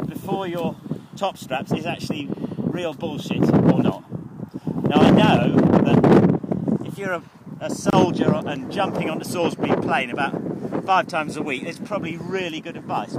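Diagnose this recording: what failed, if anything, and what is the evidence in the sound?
A gap at a join of encoded pieces opens at 7.90 s and lasts about 28 ms, ending at 7.93 s, after which the sound resumes from where it stopped. The failure is at the codec stage: the audio was encoded in separate pieces and joined without trimming, so the first piece's padded final frame and the next piece's start-up delay both remain. Codec smearing softens the gap's edges rather than leaving a clean cut.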